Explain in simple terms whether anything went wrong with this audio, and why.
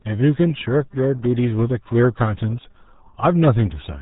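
Yes, something went wrong for the whole clip. The speech was squeezed through the RealAudio 14.4 codec, an old format built for dial-up modems. It saves space by throwing sound away. Nothing above about 3.8 kHz survives, so the crisp top of the speech is gone and it sounds muffled. The squeezing here is heavy, so the speech also turns gargly and watery from start to finish.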